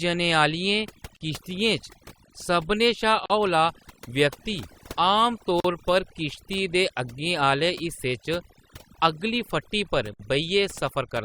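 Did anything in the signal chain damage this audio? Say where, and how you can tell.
Yes. Overdone noise removal runs throughout, at the processing stage. The background drops and breaks up into twinkling specks. A noise reducer set too strong is switching off individual frequency bands near its noise estimate, and taking quiet speech detail with them.

Gaps at joins of encoded pieces occur at 1.17–1.21 s (45 ms), 3.26–3.30 s (43 ms), 5.60–5.64 s (43 ms) and 10.14–10.20 s (59 ms), from the codec stage. Each is an abrupt, slightly smeared silence after which the sound resumes where it stopped. Separately encoded segments were joined with their start delay and end padding left in.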